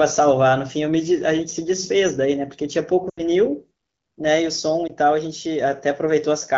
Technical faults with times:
3.09-3.21 lost AMR speech frames
4.87-4.92 lost AMR speech frames

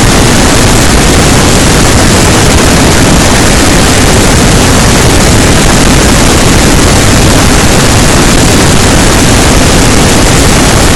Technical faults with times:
0.00-10.96 hard clipping

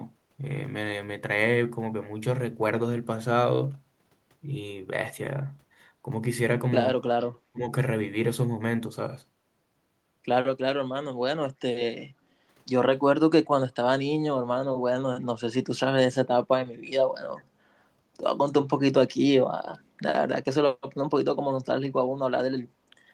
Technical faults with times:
7.52-7.62 speech suppressed in double talk
12.09-12.37 background gated by the echo canceller
22.60-22.64 echo leak
22.80-22.93 background gated by the echo canceller

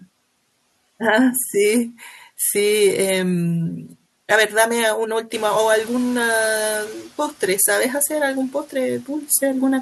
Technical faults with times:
5.34-6.95 noise suppressor catching up

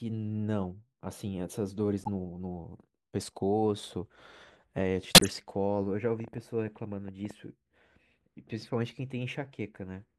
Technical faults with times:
1.99-2.08 corrupt frame decoded
5.14-5.28 corrupt frame decoded
6.20-7.32 train of clicks

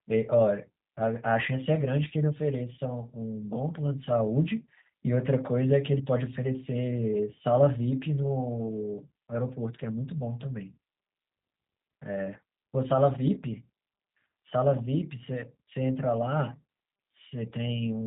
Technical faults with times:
0.00-18.07 G.729 codec

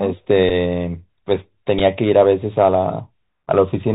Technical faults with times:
0.00-3.94 Bluetooth CVSD headset codec
0.49-0.52 Bluetooth headset packet repeated
1.79 Bluetooth headset packet repeated

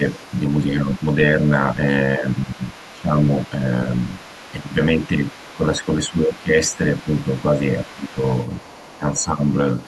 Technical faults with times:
0.00-0.04 speech suppressed in double talk
0.07-1.14 other side's voice leaking through
0.58-3.86 speech suppressed in double talk
1.72-5.55 other side's voice leaking through
4.55-9.64 speech suppressed in double talk
6.35-8.99 other side's voice leaking through
9.79-9.87 other side's voice leaking through

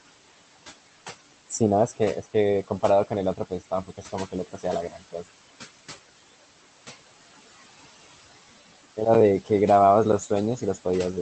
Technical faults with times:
0.00-11.22 noise suppressor artifacts
3.37-4.65 speech cut by the noise suppressor
4.90-5.15 speech cut by the noise suppressor

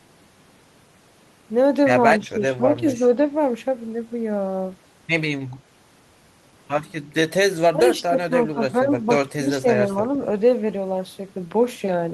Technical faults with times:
2.21-2.86 speech suppressed in double talk
7.73-8.89 speech suppressed in double talk
9.35-9.67 speech suppressed in double talk

